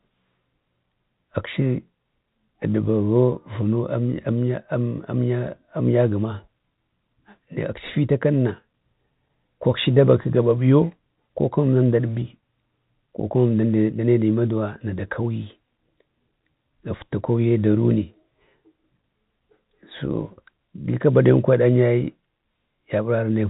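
No faults are audible anywhere in the speech, which arrives through G.711 telephone coding with the expected telephone band limit at 4 kHz.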